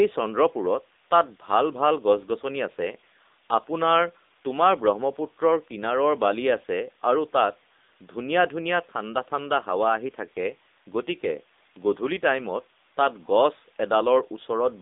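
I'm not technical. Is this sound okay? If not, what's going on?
No. From start to finish the speech sounds thin, boxy and buzzy, like an old mobile phone call, with a synthetic edge to it. That is the AMR narrowband mobile codec, the compression used on older phone networks. It keeps only the middle of the sound, roughly 250 Hz to 3.7 kHz, and nothing above about 3.8 kHz gets through. It also rebuilds the voice from a simplified model, and at this setting that damage is plainly audible.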